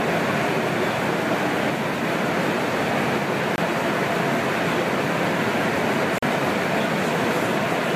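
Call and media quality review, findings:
Bluetooth stall, two dropouts: 3.56–3.58 s (22 ms silence) and 6.18–6.23 s (41 ms silence). Likely radio interference delaying packets; headphone buffer underruns, playback halts until retransmissions land. Audible as brief hard cuts to silence, sound resuming afterward.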